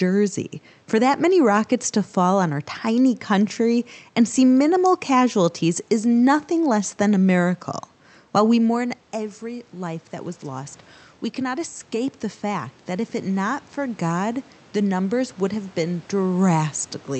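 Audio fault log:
8.74 to 10.81 s and 11.35 to 16.41 s, automatic gain rising: just after the voice drops away at the microphone around 8.5 s, as the talker moves back, both the voice and the room noise behind it slowly swell louder together, by about 4 dB over the first two seconds and then by about 6 dB more across the next five. The input fell by about 13 dB, so the automatic gain control turned itself up gradually to compensate, lifting the background along with the voice.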